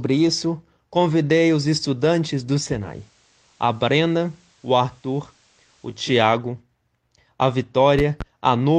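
A speech recording with two faults. From 2.67 s, just after "convidei os estudantes do", digital radio blends to analogue FM. A 314 ms cross-fade brings in hiss roughly 35 dB down, and level drops about 1 dB. It blends back at 6.15 s. Between 7.99 and 8.24 s come two loud pops, roughly 10 dB above the speech. The speech carries on beneath them. A voltage spike from a plug, switch or static discharge is the likely cause.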